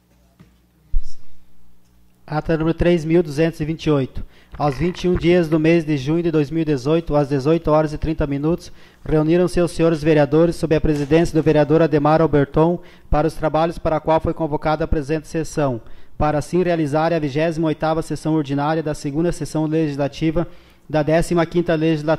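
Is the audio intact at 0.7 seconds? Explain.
Yes, the audio is intact at 0.7 seconds, with no dropout, click, distortion or other fault at that moment.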